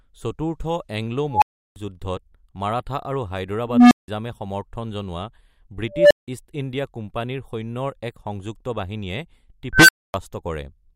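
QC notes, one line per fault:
1.31–1.76 s, unstable filter: a recursive filter's feedback runs away, so a tone near 1 kHz swells over 0.11 s into clipping, then overflow mutes the output for 0.34 s until reset.
3.65–4.08 s, unstable filter: the same runaway, slower; a low hum around 200 Hz builds over 0.26 s, clips, then drops out for 0.17 s.
5.90–6.28 s, unstable filter: a tone around 500 Hz builds over 0.20 s, clips, then 0.17 s of silence.
9.73–10.14 s, unstable filter: a squeal near 1.5 kHz builds over 0.16 s, clips, then 0.26 s of silence.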